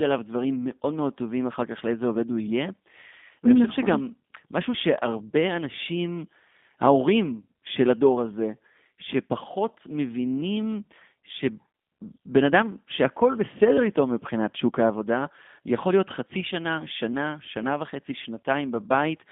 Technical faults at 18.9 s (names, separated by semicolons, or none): G.729 codec